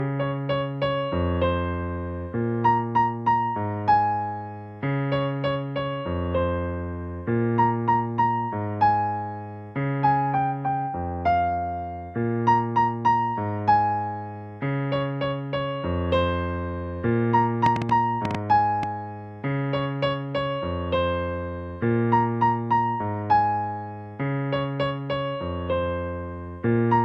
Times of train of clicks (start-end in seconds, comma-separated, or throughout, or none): 17.66-18.84